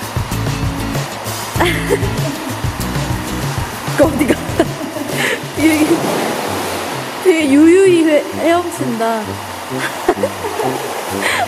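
Timecode bleed runs through the whole clip. A steady chirping warble sits behind the sound, roughly 20 dB below it. Linear timecode has leaked in from a nearby track or cable. Its square wave flips between tones around 1 and 2 kHz. The rhythm fits 23.976 frames per second.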